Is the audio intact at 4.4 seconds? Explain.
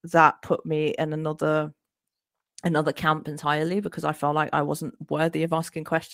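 Yes, the speech at 4.4 seconds plays through cleanly, with no dropout, click, distortion or other fault at that point.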